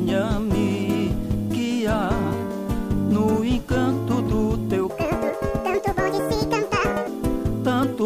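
From 4.90 to 7.08 s, a section at the wrong speed runs 1.85 times fast, likely from a wrong clock. Pitch jumps about ten semitones and tempo hurries together, unlike a pure pitch shift.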